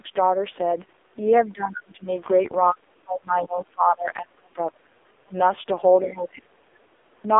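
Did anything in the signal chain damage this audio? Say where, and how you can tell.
Yes. At the codec stage, AMR narrowband mobile codec damage runs throughout: nothing above 3.6 kHz, with heavily buzzy, synthetic speech that fits its low 5.15 kbps mode.

In call processing, speech is suppressed in double talk at 1.5–2.08, 2.73–4.88, 5.22–5.35 and 6.01–6.71 s, with the level dropping by about 25–30 dB. The likely cause is the echo canceller ducking the talker.

Also in call processing, faint scraps of the other side's voice leak through at 3.46–3.6, 3.99–4.06 and 5.33–5.39 s, well below the speech. This is likely echo the canceller left behind.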